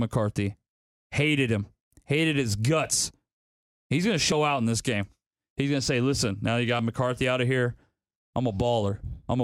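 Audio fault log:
4.32 s and 6.79 s: audio missing between chunks. Two small skips sit about 2.5 s apart, one between "going to" and "out in this game", the other right after "say listen now you". Each drops roughly 30 ms of speech. The two sides are butted together with no silence, so the flow jumps forward instead of pausing. The even spacing points to a likely cause: a recorder or processor handling 2.5 s blocks and losing a sliver at each hand-over.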